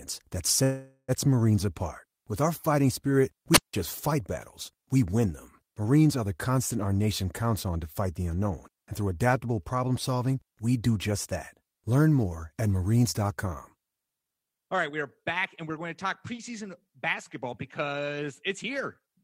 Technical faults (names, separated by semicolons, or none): call audio freeze; wireless microphone squelch dropout; jitter buffer speed-up